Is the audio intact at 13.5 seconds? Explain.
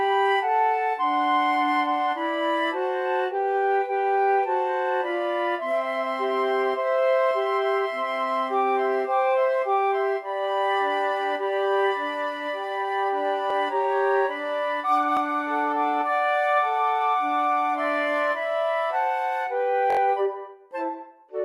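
No. From 13.50 to 13.53 s there is a repeated buffer. New audio arrived too late, so the device played its last chunk a second time: about 21 ms of sound is heard twice, which fits a 1024-sample buffer. The hard join at the repeat is heard as a short stutter. A dropout would leave a silent gap, but here nothing is missing. The same short piece simply sounds again, so the timing stretches slightly.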